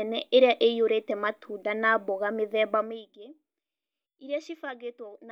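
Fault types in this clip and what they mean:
Nothing in this speech recording stands out as a technical fault; it's a faultless listen.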